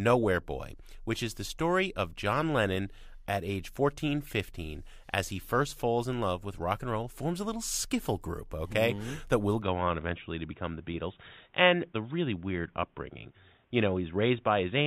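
From 9.62 s to the end the speech turns dull and boxy, with nothing above 3.8 kHz and faint new noise, likely an input switched to a poorer device.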